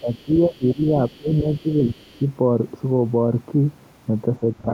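Right from the start, 0.0 to 2.25 s, there's faint other side's voice leaking through, sitting about 35 dB under the talker. That's likely the far end playing on the talker's loudspeaker and the echo canceller not scrubbing all of it from the mic. Over the same stretch you get speech suppressed in double talk, from 0.0 to 0.88 s and 1.11 to 1.97 s, with the talker's level ducking by about 20 dB for roughly half a second within each stretch. There's a tiny 5 dB dip at 2.19 to 2.23 s, then a deeper one, about 25 dB, from 4.4 to 4.68 s. The canceller likely couldn't tell the talker from the echo and pulled both down.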